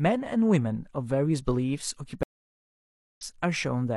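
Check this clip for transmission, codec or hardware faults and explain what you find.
There is one fault, a stream reconnect. From 2.23 to 3.22 s the connection dropped, leaving 0.94 s of flat-line silence. A fresh decoder then resumed speech roughly a second further on, skipping content.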